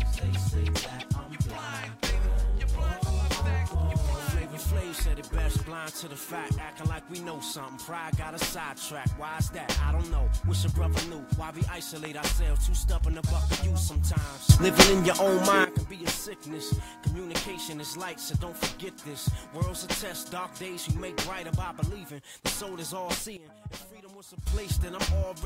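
The audio has two sudden gain jumps, about +15 dB from 14.49 to 15.65 s and about −13 dB from 23.37 to 24.47 s, likely from unramped gain changes. The background noise steps instantly with the sound, unlike a compressor's gradual pumping.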